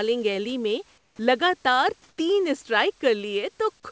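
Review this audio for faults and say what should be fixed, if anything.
In two speech pauses, from 0.98 to 1.19 s and from 2.09 to 2.18 s, the room background, sitting about 40 dB below the speech, turns into a flat, featureless hiss about 3 dB quieter before the sound resumes. This is comfort noise in place of the background, likely from discontinuous transmission: the sender stopped sending during the pause and the receiver filled it with synthetic noise. Disabling discontinuous transmission, or raising the voice detector's sensitivity on the sending side, would keep the real background in these gaps.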